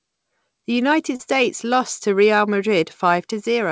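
At about 1.16 s, just before "lost to", there's a short concealed packet loss running to roughly 1.22 s. Around 40 ms of audio didn't arrive at the decoder in time, and the receiver covered the gap by stretching the preceding sound for about 30 ms before blending back into the real signal. You hear it as a quick smear or wobble, and anything brief in that spot can just drop out. The call path itself stops at 8 kHz, which fits G.722.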